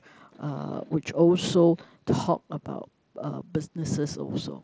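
No faults: the speech comes over a wideband mSBC Bluetooth headset link, bandwidth topping out at 8 kHz with a faint grain on louder syllables, as that codec normally sounds.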